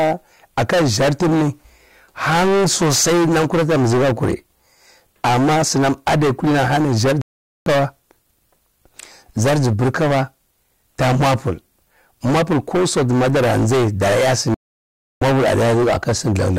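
Hard clipping runs through the whole speech clip. The signal was driven about 21 dB past what one stage could pass, so nearly a third of the waveform has its peaks sliced flat. Those squared tops add harmonics high into the spectrum, giving a harsh, buzzy fuzz on every loud syllable. Unlike soft saturation, which rounds peaks and thickens the tone gently, the fizz here starts abruptly and stays gritty.

A digital broadcast dropout cuts the audio to silence from 7.22 to 7.67 s, about 0.45 s. A second, longer one follows from 14.54 to 15.22 s, about 0.67 s. Each time the receiver stopped getting valid frames and muted until clean data returned, so that stretch of programme is simply gone. Packet-loss concealment would fill the gap with smeared or repeated sound. These holes are true silence.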